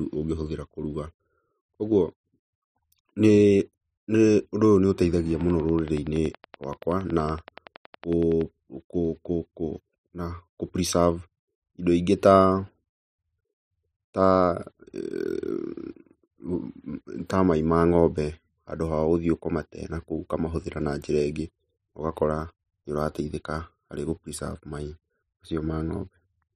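From 5.41 to 8.42 s a regular train of clicks ticks at 10.7 per second, about thirty, likely interference; spectrogram shows evenly spaced vertical lines.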